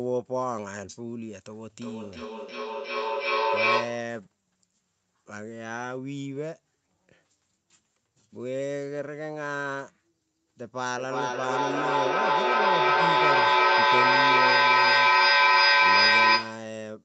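Two devices in the same room share the call, so one replays the other's microphone and the echo canceller misses it: feedback echo between two devices from 1.79 to 4.24 s and 10.98 to 16.82 s. Thin, ringing repeats come roughly every 0.4 s and build to about 8 and 12 dB above the speech.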